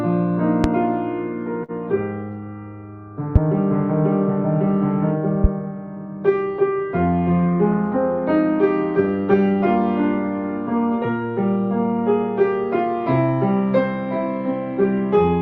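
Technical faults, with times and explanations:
0.64 s, 3.36 s and 5.44 s: loud pop. Each is a single sharp pop lasting about 30 ms, up to about 20 dB above the surrounding sound, which carries on underneath. A likely cause is a voltage step from a plug, switch, static or driver glitch.
1.63 to 1.71 s: short stall from a late packet. A packet arrived late and the jitter buffer ran dry. The receiver held the last sound for 51 ms, then resumed where it left off. Nothing is lost, but the held sound drags briefly.
7.46 to 7.96 s: jitter buffer speed-up. Too much audio had built up in the buffer, so the receiver cut many short pitch-period pieces, about 50 ms in total. The sound plays at 109% speed with unchanged pitch and seems briefly hurried.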